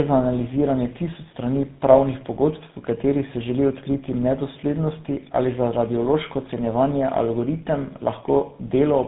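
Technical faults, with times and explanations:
Throughout: tandem speech coding. The speech sounds like it passed through about three speech coders in a row, most likely including GSM full rate at 13 kbit/s, decoded and recoded at each hand-off. Every stage compounds the previous damage, leaving the speech rough, muffled and warbly. On a spectrogram, energy stops sharply near 3.8 kHz, and the harmonics look smeared and blotchy. In the waveform, the envelope is grainy and irregular.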